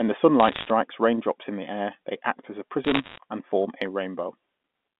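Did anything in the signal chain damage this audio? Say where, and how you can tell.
Yes. Bit errors on a digital phone line corrupted the transmission path. Sharp ticks and crackle sit over the speech at 0.4–0.7 s, before "raindrops in the air", and at 2.84–3.18 s, between "they act as a" and "and form a". Each flipped bit corrupts one sample, and hits on the high bits, or on the sign of loud samples, click loudest.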